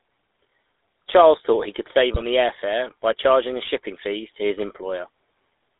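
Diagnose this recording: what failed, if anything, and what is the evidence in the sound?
The codec stage shows damage for the whole clip. The speech is confined to roughly 300 Hz to 3.7 kHz, with nothing above. It has a plainly audible buzzy, gravelly roughness, which fits GSM full-rate coding at 13 kbps. This GSM full-rate codec models the vocal tract as a filter. It excites that filter with a coarse, regularly spaced pulse train and keeps only a third of the excitation samples. The lost detail comes back as grit and buzz.

The radio link failed briefly. From 2.14 to 2.23 s, between "thought he could save" and "the air fare by", the sound breaks into a short garbled, distorted burst. These are GSM bit errors. Corrupted bits reached the decoder and scrambled the filter, pitch or gain parameters. The decoder then rebuilt a wrong spectrum or level. The 84 ms span fits about four damaged 20 ms frames, and the damage points to a bit error rate around 1 percent.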